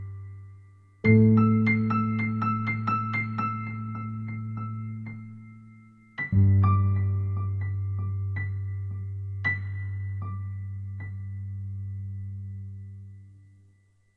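No technical faults can be heard anywhere in this recording of sounds. Nothing in it stands out as needing a fix or a closer look.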